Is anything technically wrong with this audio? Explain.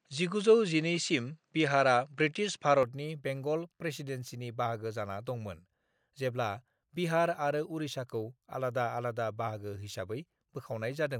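Yes. From 0.0 to 2.83 s the speech sounds dull, with nothing above 9.2 kHz and a faint noise floor. It likely came through a poorer input device before switching.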